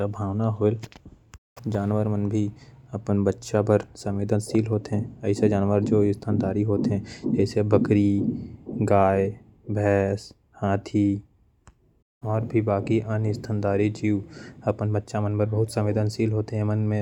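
No dropouts, clipping, glitches or other technical faults can be heard anywhere in the recording.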